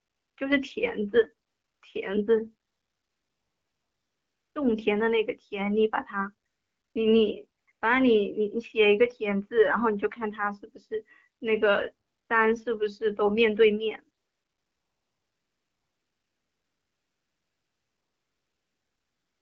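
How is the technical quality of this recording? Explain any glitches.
The recording has repeated AMR comfort noise gaps: 0 to 0.37 s, 1.47 to 1.81 s, 2.67 to 4.55 s, 6.47 to 6.95 s, 7.59 to 7.67 s, 7.71 to 7.81 s, 12.07 to 12.29 s, and 14.17 s to the end. In each, the sender treated the audio as silence and stopped transmitting speech frames. The receiver generated smooth, steady synthetic noise from a rough level and spectrum estimate, so the real background drops out and the hiss switches abruptly in and out. The speech itself carries the light coloration of AMR wideband coding, which fits a 12.65 kbit/s mode.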